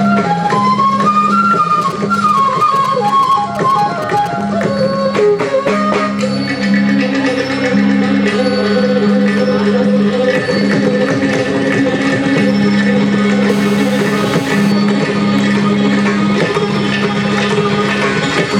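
A nearby 2G phone exchanging only short signalling bursts with its network had its radio pulses rectified by the audio circuitry, producing GSM signalling bursts from 1.82 to 4.28 s: a galloping dit-dit-dit of brief 217 Hz buzzes, roughly 15 dB below the wanted sound. Later, the same kind of phone transmitting in bursts 217 times a second during a call caused GSM phone buzz from 13.49 to 14.72 s, a steady, hard, raspy 217 Hz drone rich in harmonics, about 16 dB under the audio and unrelated to it.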